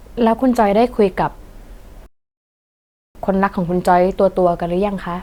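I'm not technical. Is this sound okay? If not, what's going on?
No. At 2.06 seconds the speech stops dead and stays silent until 3.15 seconds, then carries on exactly where it left off. That's a rebuffering stall: the player ran out of downloaded audio and waited about 1.1 seconds for more. Unlike a dropout, no speech is skipped; the clip just gets longer.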